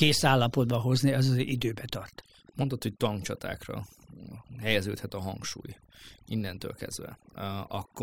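Throughout, the background drops and breaks up into twinkling specks: overdone noise removal muted individual frequency bands, taking quiet speech detail with them.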